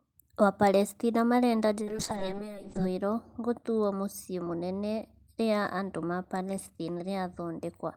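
From 1.85 to 2.95 s, a call bitrate drop starves the encoder, fitting a fall to about 7 kbps; speech turns coarse, watery and muffled.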